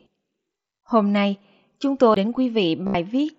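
At 2.14 s, just after "nay chúng", a CD skip: the laser lost its track on the disc's spiral and resumed from a different turn. It is heard as a tick and a very brief mute, after which the speech continues from a displaced point rather than where it left off.

From 2.87 to 2.95 s comes concealed Bluetooth headset packet loss. About 75 ms of headset audio failed to arrive, which points to a run of consecutive lost packets. The receiver filled the gap by repeating recent waveform, producing a buzzy, steady tone at full level, then a slight warble as real speech resumes. The mSBC link carrying the speech keeps it band-limited to 8 kHz with a light grain on louder sounds.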